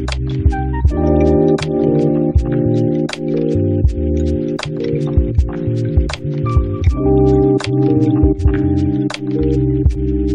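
Nothing is technically wrong with this audio.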